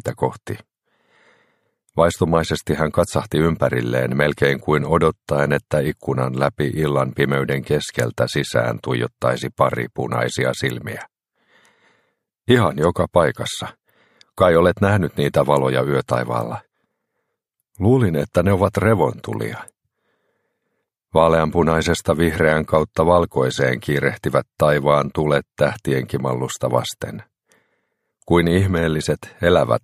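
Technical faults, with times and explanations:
No technical faults are audible anywhere in this clip.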